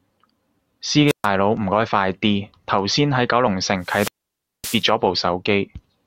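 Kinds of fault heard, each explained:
Wireless microphone squelch dropout: the radio link from an analogue FM mic fades, and once the signal gets too weak the receiver's squelch mutes the output rather than passing noise. You hear a short swell of hiss, then a hole, then the speech coming back. It happens twice here: around 1.07 to 1.27 s with a mute of about 0.13 s, and a longer one from 3.80 to 4.89 s where the gap runs about 0.57 s.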